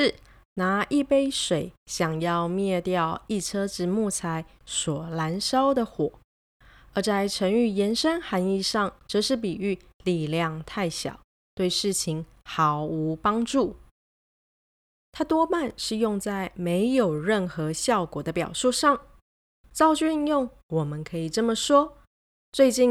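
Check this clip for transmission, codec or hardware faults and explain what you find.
Nothing stood out on listening to this speech recording.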